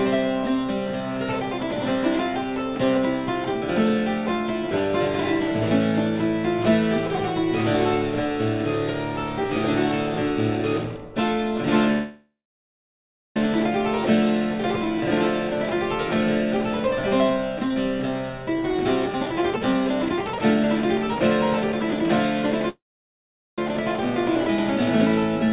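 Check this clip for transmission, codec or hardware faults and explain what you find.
Two kinds of fault are present: two call audio freezes and two stretches of jitter buffer speed-up. The band stops at 4 kHz, which points to G.711 A-law narrowband coding.

Call audio freeze, 11.92 to 13.37 s and 22.69 to 23.59 s. The audio stalls for about 1.4 s and then about 0.9 s. The likely cause is delayed packets leaving the jitter buffer empty, so the receiver extends the last sound briefly, then goes quiet for about 1.0 s and 0.8 s. The audio resumes exactly where it stopped, so nothing is lost, but the delay grows by the length of the gap. On a waveform each freeze shows a short fading tail and then a flat line. On a spectrogram it is a smeared, decaying band followed by a blank column.

Jitter buffer speed-up, 17.30 to 17.76 s and 18.29 to 21.21 s. The buffer is holding more audio than it aims for. 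To catch up, it cuts out short pitch-period-length pieces many times in a row. The first stretch runs about 13% fast, dropping roughly 70 ms. The second runs about 22% fast, dropping around 0.7 s. The pitch stays the same, but the sound feels hurried. A spectrogram shows harmonics at unchanged heights with events crowded closer together. The waveform shows fewer cycles, each of unchanged length.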